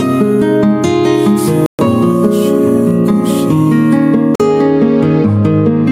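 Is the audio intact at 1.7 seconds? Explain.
No. A Bluetooth stall runs from 1.66 to 1.79 s: the sound drops to silence for about 0.13 s, then resumes. The likely cause is interference holding up packets until the headphones' buffer ran dry and playback paused for the resends. Gain pumping is also present there, with the gain swinging by about 5 dB and loud and soft parts squashed closer in level. That is likely excessive input gain with a fast limiter clamping down on each peak.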